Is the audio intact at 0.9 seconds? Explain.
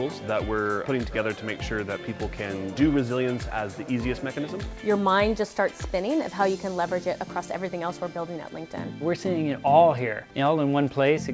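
Yes, the audio at 0.9 seconds is intact, with nothing heard beyond the ordinary sound of a G.722 call path that carries nothing above 8 kHz.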